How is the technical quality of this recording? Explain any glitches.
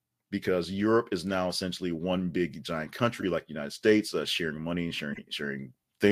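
Two short glitches from a corrupt frame decoded. At 3.20–3.24 s, after "essentially one big giant", and 5.10–5.20 s, after "uh sharing money and", damaged compressed frames (a couple, then a few) played anyway, scattering energy into wrong frequencies as brief squeaky noise bursts.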